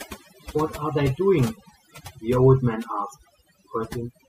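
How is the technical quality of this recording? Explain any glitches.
The main problem is overdone noise removal, and it runs through the whole speech clip. A noise reduction stage was pushed too hard, so any frequency band sitting close to its idea of the noise floor gets pulled way down or switched off. The quiet parts of the speech go with it. Between phrases the background drops and breaks up into little twinkling specks.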